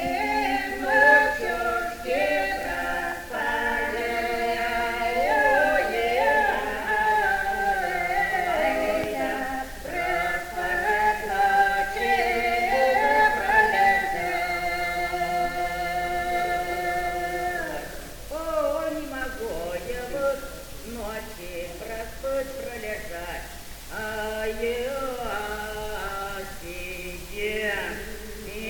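A loud pop lands at 9.04 to 9.06 s: a single sharp, brief pop of about 24 ms that jumps roughly 15 dB above the surrounding level. It sits on top of the audio, which carries on underneath without a break. The likely cause is a sudden electrical step or pulse, from a plug, switch, static discharge or driver glitch, entering the signal path. The following circuitry shapes it into a short, hard transient.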